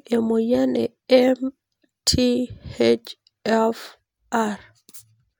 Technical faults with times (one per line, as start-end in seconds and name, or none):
none